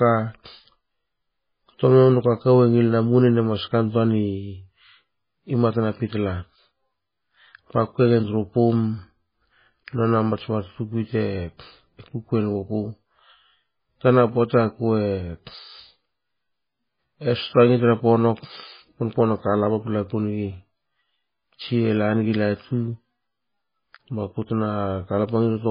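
Throughout the recording, the speech has likely passed through heavy MP3 compression, with damage severe enough to point to a very low bitrate of around 16 kbps. Starved of bits, the encoder removes everything above 5 kHz and zeroes weak frequency lines, which then flicker in and out from frame to frame. The result is dull, muffled speech with a watery, swirling texture, metallic chirps on s sounds, and consonant onsets that smear.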